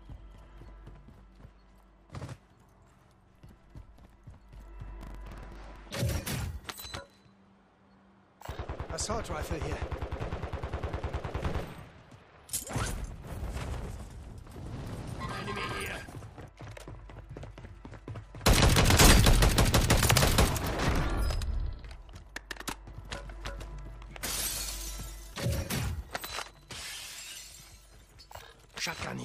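From 5.01 to 5.76 s a gritty, tearing crackle rides on top of the sound, then stops. This is processor overload crackle: the processor fell behind and missed a long run of buffer deadlines, and each miss replayed a sliver of old audio with hard edges. The fine, dense grain of the clicks suggests very short buffers of around 3 ms, with something like fifteen misses packed into that stretch.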